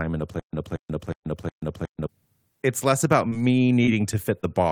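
From 0.40 to 2.07 s the speech shows a stutter with silent gaps. A burst of about 0.23 s repeats four times, each followed by about 0.14 s of digital silence, every 0.36 s. A stalled stream likely replayed its last fragment at each retry. The audio meant for that span is lost.

At 3.29 to 3.33 s comes short concealed packet loss. About 20 ms never arrived. The decoder continued the last sound to fill it, leaving a brief smear.

From 3.65 to 3.80 s a short stall from a late packet holds a sound about 32 ms too long. The receiver stretched it while waiting, then resumed. Nothing is missing.

Two more short concealed packet losses follow, at 3.85 to 3.89 s and 4.41 to 4.45 s. Each fills about 20 ms of lost audio with a short smear.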